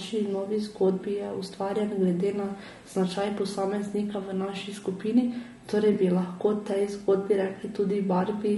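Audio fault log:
throughout  Low-delay AAC compression: the speech sounds rough and grainy, with noise filling the gaps between harmonics and a thin, synthetic-sounding top band. This is likely AAC-ELD at a low rate, around 32 kbps, whose short frames resolve pitch harmonics poorly.
5.93–5.96 s  AAC frame loss with concealment: a brief smeared, noisy patch interrupts the speech. The decoder lost a block of data, which fits a single 20 ms frame, and rebuilt it from the preceding spectrum, so the gap is papered over rather than sounding cleanly.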